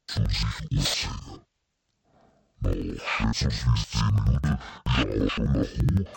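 From start to end, the speech shows interleaved audio read as planar. Each block of about 85 ms, which fits a 4096-sample block, is split in halves and treated as two channels. The voice drops an octave, sounds doubled, and chops at about 11.7 Hz.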